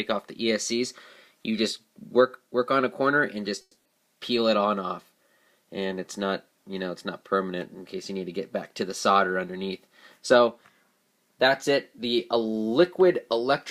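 At 3.61 s the sound stops being real and turns into a smeared, buzzy continuation of its last moment that fades over about 240 ms, followed by about 30 ms of silence before normal audio resumes at 3.88 s. That pattern is likely a long network dropout, with the receiver filling the gap by stretching old sound. Unlike a brief packet loss, the fill runs out into silence, and about 240 ms of the original is simply gone rather than delayed.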